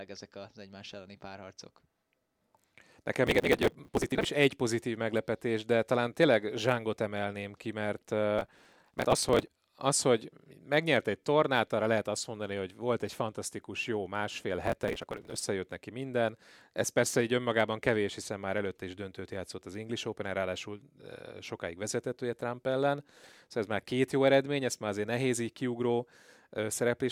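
Processor overload crackle hits the speech at 3.27–4.25 s, 8.39–9.48 s and 14.67–15.41 s: many buffers, each around 5 ms, are skipped, leaving hard-edged gaps heard as gritty tearing. The waveform shows dense dropouts; the spectrogram shows vertical broadband streaks.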